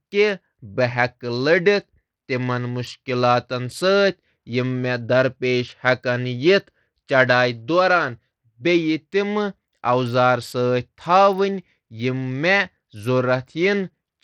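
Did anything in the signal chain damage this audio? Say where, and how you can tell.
Yes, at the codec stage: throughout, the speech's treble flickers and drops out under gritty noise, likely Bluetooth SBC compression at about 80 kbps, not a steady low-pass filter.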